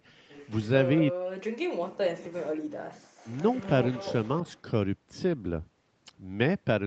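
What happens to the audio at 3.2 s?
At 3.2 s there is an echo leak, running from 3.17 to 3.69 s. A faint second copy of the speech trails the original by 233 ms, sitting about 25 dB below it. The likely cause is a far end on loudspeaker whose echo canceller let some of its microphone pickup through and sent it back down the call.

Just before this, from 2.98 to 3.17 s, the background is gated by the echo canceller. The room sound is pulled down by up to about 40 dB for roughly a fifth of a second while the canceller treats the loudspeaker signal as active, and it comes back as the canceller releases. The gap is heard as a brief hole in the ambience immediately ahead of the leaked echo.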